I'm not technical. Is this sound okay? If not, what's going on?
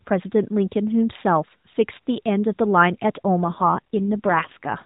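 No. From about 3.44 to 4.75 seconds the voice turns rougher and more buzzy, almost robotic, without any gap or break, then returns to its earlier phone-call quality at the very end. This is an AMR rate drop. The mobile speech codec was pushed to a much lower quality setting, as happens on a weak signal, so it described the voice more crudely and the speech came out harsher and more synthetic.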